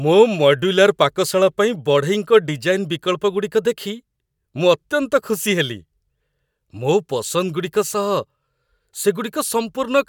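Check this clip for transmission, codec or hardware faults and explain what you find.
No transmission, codec or hardware faults turn up in this clip.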